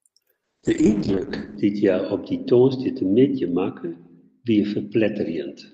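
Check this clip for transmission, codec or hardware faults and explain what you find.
One transmission fault is present. Call bitrate drop from 0.45 s onward: the encoder falls from 32 to 6 kbps and cuts bandwidth to 8 kHz, so speech turns coarse, watery and muffled.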